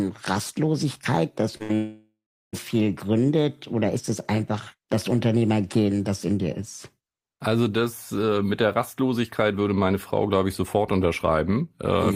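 At 1.57 s, a short concealed packet loss: about 20 ms of the stream failed to reach the decoder in time, and the receiver bridged it with 25 ms of continued sound before blending back. The result is a brief smear lasting until 1.62 s.

From 1.63 s to 1.71 s comes a burst of packet loss. Around 60 ms of consecutive audio went missing, and the receiver extended the last sound for 62 ms while turning it down, so a held buzz or fading hiss replaces what was lost.

Between 1.75 s and 2.55 s there is a long stretch where roughly 780 ms of audio is gone, likely a long network dropout. A continued, decaying buzz or hiss fills the gap. That fill gives way to about 380 ms of silence before the speech resumes further along, with the missing part skipped.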